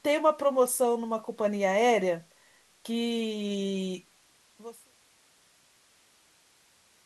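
No technical faults are audible.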